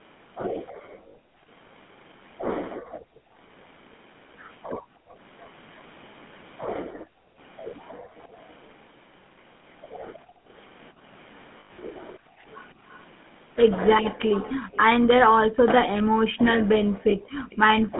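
A speech clip carried over a call using the GSM full-rate codec. The whole clip has a buzzy, gravelly roughness typical of that codec, and the damage is plainly audible. The band is narrow, about 150 Hz to 3.5 kHz, which fits the 13 kbps GSM line. From 0.72 to 17.5 s, the background is gated by the echo canceller. The room sound dips and drops out, by as much as about 40 dB, for about four seconds in all. It returns each time the canceller releases. There are lost GSM frames at 1.08 to 1.17 s, 11.6 to 11.77 s and 17.10 to 17.13 s, lasting 60, 120 and 20 ms. Each gap is filled by holding the last good sound, which gives a rough, metallic ring. The middle loss is broken up over 160 ms, with its longest run near a tenth of a second. From 5.41 to 17.56 s, a faint delayed copy of the speech follows the speech by 316 ms, well below the speech in level. This is likely an echo leak. A speakerphone's canceller probably failed to remove all of the sound picked up from its loudspeaker.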